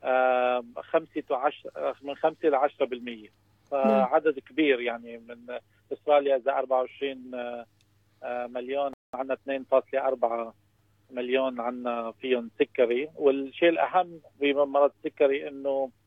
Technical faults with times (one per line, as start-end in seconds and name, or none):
8.93-9.13 playback stall
9.13-9.53 time-compressed catch-up